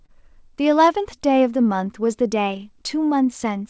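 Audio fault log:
Throughout: clock drift between sender and receiver. The sending clock runs slow, by roughly 3 percent. Audio arrives a little late, so the jitter buffer keeps draining. The receiver must stretch the sound to keep playing, which causes small timing hiccups across the clip.
0.06–0.11 s: short stall from a late packet. A packet arrived late and the buffer ran dry. The receiver held the last sound for 27 ms until it came, so the sound drags briefly. Nothing is lost, but the delay grows by 27 ms.
0.85–3.60 s: repeated timing corrections. The receiver keeps repeating short pieces to match the slower sender. This slows the audio to 97 percent speed and adds around 70 ms. The edits are small and unevenly spaced. Nothing above 8 kHz survives, which fits a wideband codec such as G.722.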